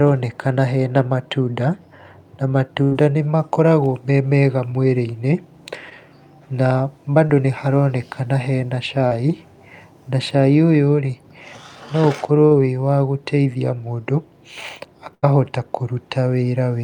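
Speech with two kinds of network fault. Two bursts of packet loss, at 2.83–2.93 s and 15.15–15.24 s, are each filled with about 80 ms of decaying continuation, a fading buzz or hiss, before the audio resumes about 80 ms further on with that stretch missing. Four instances of short concealed packet loss, at 5.89–5.93 s, 7.27–7.31 s just before "nĩ haronekana hena", 9.07–9.13 s just after "nĩ haronekana hena", and 12.47–12.53 s, are each a brief smear or wobble where 20 to 40 ms of the signal was lost and 15 to 40 ms of extrapolated sound was blended back into the real signal.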